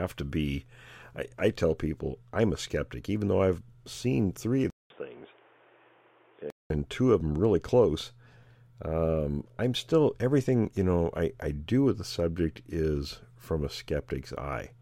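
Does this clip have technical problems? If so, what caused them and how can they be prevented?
Yes. From 4.70 to 6.70 s the speech turns dull and boxy, with nothing above 3.6 kHz. It drops about 10 dB in level, and a new, fainter background noise appears beneath it. A 200 ms gap marks the change. This is likely an input switched to a poorer device, such as a backup microphone or a headset's call profile, whose narrow band and own noise replace the original path. To prevent it, lock the chosen input device and disable automatic switching before recording.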